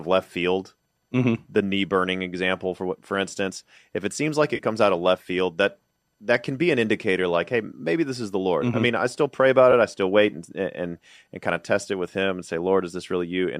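At 4.56 to 4.61 s, just after "if it seems like", the speech smears into a brief noisy, phasey patch lasting about 30 ms. A shorter blip follows at 9.72 s after "i still pray about". Both are AAC frame loss with concealment: the decoder, likely running low-delay AAC, rebuilt the missing frames from the last good spectrum.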